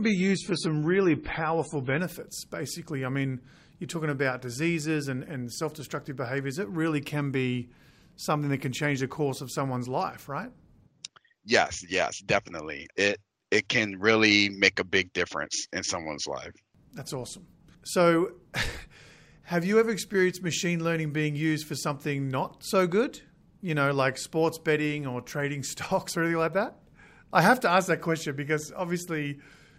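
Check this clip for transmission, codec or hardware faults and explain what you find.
One fault is present. From 0 to 2.0 s the adaptive stream starts at a low bitrate: the player opens a cheap rendition, then upgrades. Treble stops near 10.3 kHz and artefacts thicken, fitting low-rate MP3, until quality jumps gaplessly before "basically I mean you're".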